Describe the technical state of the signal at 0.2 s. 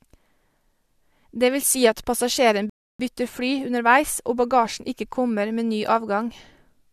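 At 0.2 s the speech signal is intact, with no audible fault present at that moment.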